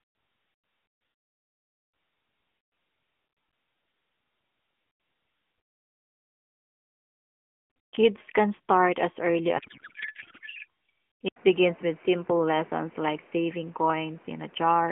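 Speech carried over an AMR narrowband mobile codec, with light codec damage and a 200 Hz to 3.5 kHz band. Just after "can start as early", from 9.58 to 10.66 s, the speech turns to garbled noise and warble. This is a codec payload misread. Octet-aligned AMR frames are being read as bandwidth-efficient, so the decoder pulls fields from the wrong bits. At 11.28 s there is an 80 ms silence. The sound then turns duller to the end, with nothing above 3.1 kHz and new background noise about 30 dB down. The level stays about the same. The likely cause is an input switched to a poorer device.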